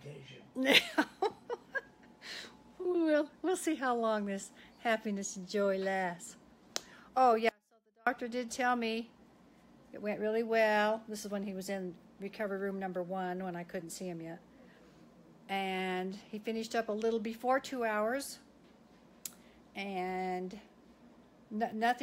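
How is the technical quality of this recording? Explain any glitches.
One glitch stands out. From 7.49 to 8.07 s, the sound abruptly collapses to a faint residue, roughly 35 dB down, for about 0.58 s. This is an audio dropout to a faint residue, likely a brief signal loss with the path left live.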